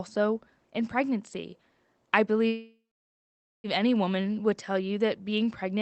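Speech heard over a call link, band-limited to about 8 kHz in a way that fits a low-bitrate Opus stream, has a call audio freeze from 2.47 to 3.67 s. The last sound trails into a fading buzz or hiss, then about 0.86 s of silence, likely because delayed packets emptied the jitter buffer. Unlike packet-loss dropouts, nothing is lost. The speech resumes exactly where it stopped, now about 1.17 s late.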